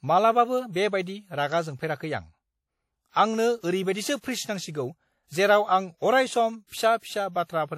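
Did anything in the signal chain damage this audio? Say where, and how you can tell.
Yes, at the codec stage. Throughout, there's plainly audible ringing, washy hiss that breathes with the speech, and nothing above 16.5 kHz. That's likely WMA compression at around 48 kbps, with long transform blocks smearing quantisation noise and dropping weak detail.

Same codec, and it produces a pre-echo from 6.67 to 6.72 s: a short hiss runs about 54 ms ahead of a sharp onset, softening it. The attack landed late in a block, so noise sized for the loud part filled the quiet gap before it.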